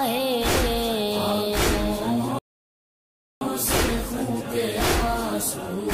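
Playback stall from 2.39 to 3.41 s: the sound goes silent mid-flow for 1.03 s, likely because the player ran out of data, then resumes.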